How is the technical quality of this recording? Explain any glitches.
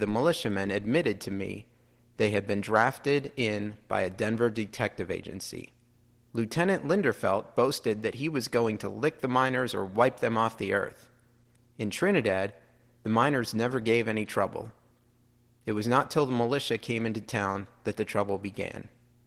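The recording has two faults, both present from start to finish: a low power-line drone and plainly audible low-bitrate voice coding.

Mains hum, throughout: a ground loop or a nearby transformer is coupling the 60 Hz power line into the signal. It comes through as a steady low tone beneath the speech, roughly 35 dB quieter than it, faint but never letting up.

Opus voice compression, throughout: the speech has passed through Opus in its hybrid mode, where a linear-prediction coder handles the lower band and a transform layer covers content above 8 kHz. Coarse coding of the excitation leaves the speech hoarse and slightly robotic, which fits a rate around 16 kbps with 20 ms frames.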